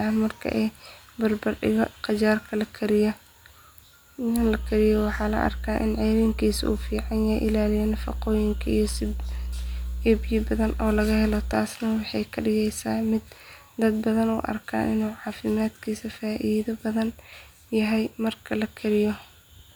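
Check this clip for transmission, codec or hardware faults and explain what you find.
Mains hum is present from 4.38 to 11.53 s: a ground loop couples 60 Hz power into the speech, giving a loud steady drone, showing as bright horizontal lines at 60 Hz and low harmonics on a spectrogram.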